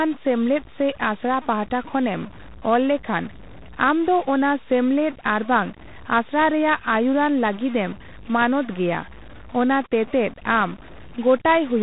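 From start to finish the speech carries distortion, and the pauses between phrases are filled with a steady noise floor. That pattern points to a stuck bit, likely one data line or converter bit held at a fixed value, pushing roughly half the samples off by that bit's weight.

Over the same span, 4-bit ADPCM compression leaves heavy damage: a gritty hiss that rides on every loud syllable and smeared, distorted attacks where the adaptive step size lags. Nothing remains above 3.9 kHz, which dulls the sound and fits a 32 kbps stream.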